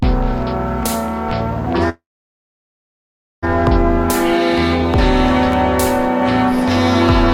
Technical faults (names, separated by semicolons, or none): call audio freeze